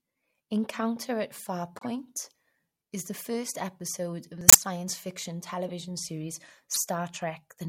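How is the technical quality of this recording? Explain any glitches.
The recording has four short glitches, all from corrupt frames being decoded. Flipped bits in the compressed data reached the decoder, which played the damaged frames anyway. Misread gains and codes placed energy at the wrong frequencies for a few frames each time, at 1.78 to 1.85 s, 4.48 to 4.57 s just after "first episode of the", 5.68 to 5.70 s, and 6.74 to 6.82 s. The results are brief chirps and noise bursts. The ones at 4.5 s and 6.8 s are loud, while the other two are faint.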